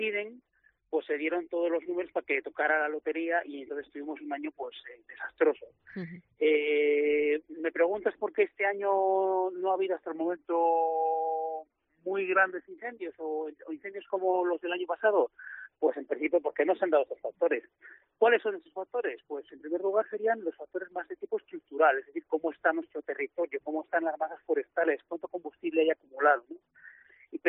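From 10.07 to 12.66 s there's a wrong sample rate fault: everything drops about 1.5 semitones and runs at 0.919 speed, which fits 48 kHz audio played back at 44.1 kHz.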